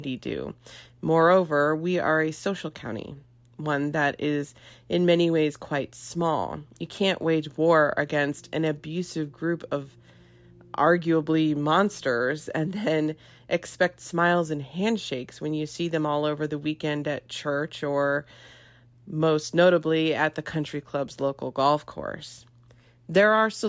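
A recording of someone talking, and nothing technically wrong turns up in it anywhere.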